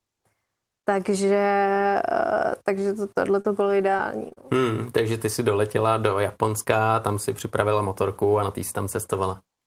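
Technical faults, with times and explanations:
3.41–4.53 s, repeated packet loss (robotic sound): right after "takže to tohle", the speech breaks up six times in quick succession. Each gap, the longest about 30 ms, is patched by stretching the preceding sound, covering 117 ms of a 140 ms total loss and leaving short holes. Those repeated synthetic fills, roughly a tenth of the stretch, give the choppy texture.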